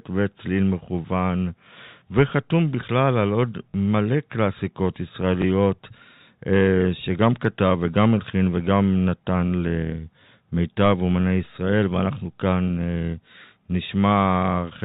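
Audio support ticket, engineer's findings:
Packet loss with last packet repeated, twice. 3.70–3.74 s: 40 ms robotic stutter, a brief buzz, which fits two lost 20 ms packets. 5.42–5.44 s: single 20 ms repeat, a small blip, which fits one lost packet. Likely the receive-side jitter buffer or concealment, replaying the last frame out of step with the pitch. Band limit sits at 4 kHz, as expected for the G.711 telephone path.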